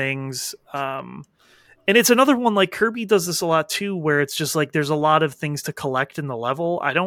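Listening through the recording, nothing stood out as a technical fault at any point.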